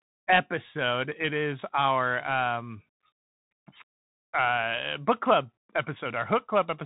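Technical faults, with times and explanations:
Throughout, Bluetooth CVSD headset codec: the speech has been squeezed through the narrowband headset path, and the damage is plainly audible. Nothing gets through above about 3.9 kHz, so the top end is simply gone. CVSD sends one bit per sample saying up or down with an adapting step, which fits a 64 kbps link. Loud high-frequency bits outrun that step and smear, so s sounds come out scratchy and there's a grainy hiss sitting under everything.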